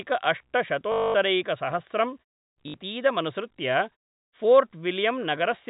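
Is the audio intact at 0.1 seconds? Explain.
Yes, the audio is intact at 0.1 seconds, with no fault there.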